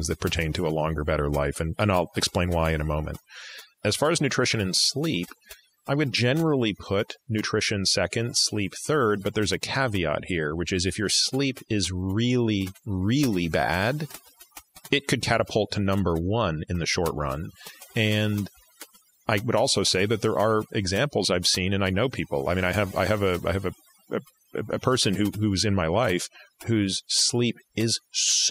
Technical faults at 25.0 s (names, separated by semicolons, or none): overdone noise removal